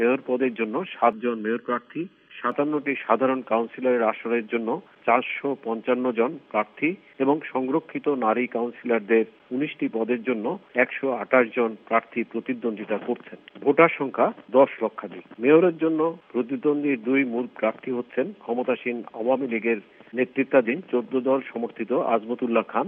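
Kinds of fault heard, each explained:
Channel delay (comb filtering): from 1.13 to 2.52 s one channel runs under a millisecond behind the other, so when the two are summed to mono their shared content cancels at evenly spaced frequencies. The first notch falls around 700 Hz, with further notches spaced above it, giving a hollow, phasey colour. Unlike flanging, the notches stay fixed rather than sweeping, and unlike a low-pass filter the loss comes in repeated dips rather than a steady roll-off of the top end.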